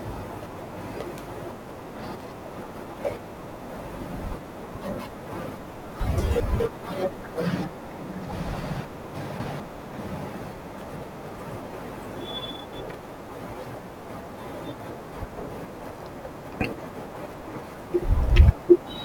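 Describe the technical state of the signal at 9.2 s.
At 9.2 s the speech has chunks out of order, from 8.80 to 9.60 s: one 200 ms chunk plays three chunks late, giving three hard joins and a jumbled moment, though nothing is missing, unlike a dropout.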